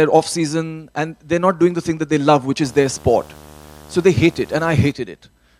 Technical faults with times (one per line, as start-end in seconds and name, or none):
2.64-4.92 video or display buzz